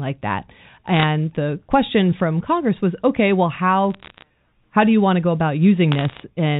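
Bit errors on a digital phone line crackle at 0.94–1.03 s before "the question from", at 3.94–4.22 s between "was okay well" and "how do you want", and at 5.92–6.20 s after "want to go about". A fraction of a percent of bits flip on the G.711 link, each changing one sample, and hits on high bits turn into sharp ticks. The waveform shows isolated single-sample spikes, and the spectrogram shows thin vertical lines running up to the 4 kHz telephone limit.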